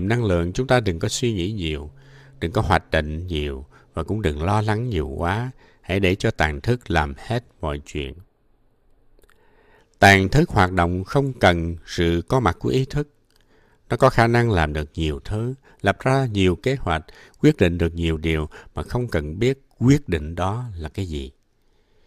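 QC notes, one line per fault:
8.04–9.79 s, channel delay (comb filtering): for this stretch one channel runs a few samples behind the other, well under a millisecond, and once the two are summed to mono their shared content cancels at regularly spaced frequencies, the first notch sitting around 7 kHz. The upper range turns thin and hollow. Unlike a low-pass roll-off, the loss comes as fixed notches rather than a smooth slope, and unlike flanging the notches stay put instead of sweeping.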